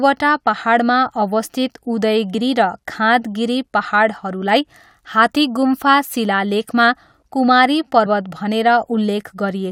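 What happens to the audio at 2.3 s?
At 2.33 s, compressed frames are skipped: the decoder drops a chunk of the speech and jumps ahead roughly 70 ms, which fits about three 21.3 ms frames. The join shows as a spectrogram discontinuity and waveform splice.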